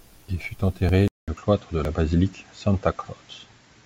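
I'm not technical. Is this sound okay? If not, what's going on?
No. In this speech, the recording was likely being handled in half-second chunks, with audio missing between chunks: a tiny sliver, about a fiftieth of a second, vanishes at each join. You hear small skips at 0.41, 0.89, 1.37, 1.85, 2.33, 2.81 and 3.29 s.

At 1.08 s the input likely switched to a poorer device. There's a brief gap of about 0.2 s, then the speech continues at roughly the same loudness but sounds duller, with nothing above 7.5 kHz, and a faint new background noise.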